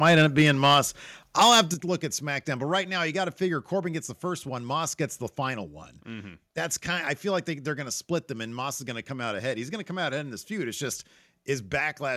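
From 0.05 to 0.79 s the speech carries microphone overload: a harsh, crackly edge on the loudest syllables, with peaks about 5 dB beyond what the converter can hold. The likely cause is input gain set too high, so wave tops are sliced off. In the waveform a small fraction of peaks are flattened where the converter's limit cut them, and the spectrogram shows broadband smearing above the voice harmonics at those moments.

At 0.74 s, right as that distorted stretch ends, the level drops abruptly by about 2 dB. This is a microphone volume step-down, likely the call software reacting to the clipping by lowering the device's input gain in one move. Voice and background fall together. The waveform envelope steps down cleanly, and the spectrogram dims evenly across all frequencies at that instant.

Overload returns from 1.41 to 1.61 s, again about 5 dB over, this time with a noticeably larger share of samples flattened. 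Its likely cause is the same: the gain is still too high for these peaks. The crackle is denser, the flat-topped runs are wider in the waveform, and the spectrogram shows stronger vertical streaks of splatter.

At 1.74 s, just before "look at", a second step-down cuts the level by about 7 dB, likely another automatic gain reduction after the clipping. The waveform shrinks sharply in one stride, the spectrogram darkens uniformly, and everything after sounds clearly quieter.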